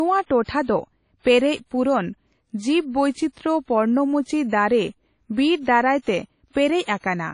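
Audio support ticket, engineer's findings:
Ringing, washy speech with hiss pumping along with the signal, throughout; nothing above 10.1 kHz. Likely WMA compression at a low bitrate, fitting 32 kbps, with long transform blocks smearing quantisation noise.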